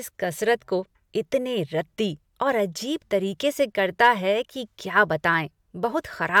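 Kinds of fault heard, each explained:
Nothing in this speech recording stands out as a technical fault; it just sounds the way it should all the way through.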